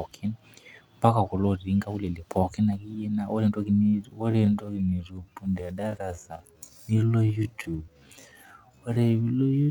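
From 3.79 s to the end at 9.71 s, right after "ore entoki", the speech becomes a time-stretched section running at 0.59 times normal speed. The pace drops abruptly while pitch holds, so the speech drags, likely from software repeating short segments to lengthen the audio.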